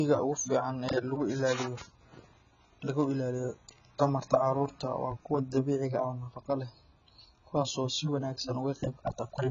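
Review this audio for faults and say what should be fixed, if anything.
Heavy AAC compression, likely AAC-LC at a bitrate consistent with around 16 kbps, runs through the whole clip. The encoder discards everything above 7 kHz and quantises the remaining bands coarsely, leaving the speech dull and smeared, with fizzy, warbling sibilants. Prevent it by encoding at a much higher bitrate or keeping a lossless master.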